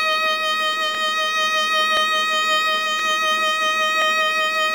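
Overlapping chunks: each one-second block starts 23 ms before the previous block ends, so that slice of music replays as a stutter at 0.95–0.97, 1.97–1.99, 2.99–3.02 and 4.02–4.04 s.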